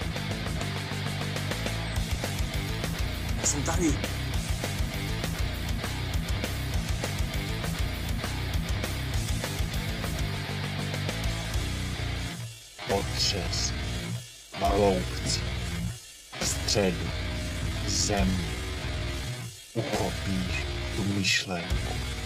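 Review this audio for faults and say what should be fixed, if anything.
Time-stretched section from 12.37 s to the end: audio slows to about 0.68× speed at unchanged pitch, so the pace drags, likely from software repeating short segments to fill length. Prevent this by fixing timing at the edit rather than stretching audio to fit.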